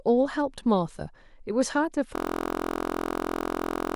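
From 2.16 s to the end, the speech abruptly gives way to a steady, rough buzz pitched at about 43 Hz, with nothing new coming through. This is a system hang loop: the computer or its audio driver stopped supplying fresh samples while the sound hardware kept replaying the same 23.2 ms stretch of its ring buffer, roughly 80 times over. A loop that short fuses into a tone rather than a stutter, which fits a 1024-sample buffer.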